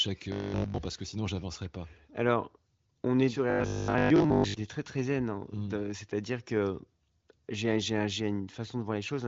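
From 0.32 to 0.78 s, and again from 3.50 to 4.56 s, the speech turns into a rigid, metallic buzz at 50 Hz that only loosely follows the original. This is robotic sound from repeated short buffers: the likely cause is new audio arriving too seldom, so the last stretch of about 20 ms is replayed in a loop while real audio is skipped. Nearly the whole first span is affected, and most of the second.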